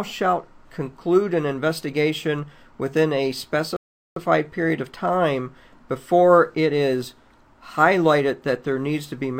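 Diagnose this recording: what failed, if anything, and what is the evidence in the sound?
The failure is at playback, a rebuffering stall. At 3.77 s the sound cuts to silence and stays silent until 4.16 s, adding about 0.4 s to the running time. The player drained its downloaded audio faster than new data arrived, so it paused output until enough was buffered to continue. Unlike a network dropout or packet-loss gap, the sound picks up at exactly the point where it broke off, with nothing skipped or concealed.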